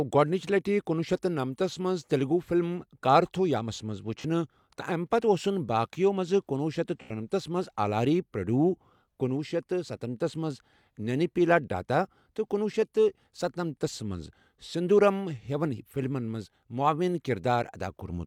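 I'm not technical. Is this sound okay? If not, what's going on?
No. At 4.20 to 4.26 s and again at 7.02 to 7.11 s, the speech briefly turns smeared and hissy. This is AAC frame loss with concealment: small chunks of compressed audio went missing, and the player patched each gap by reusing the last good moment.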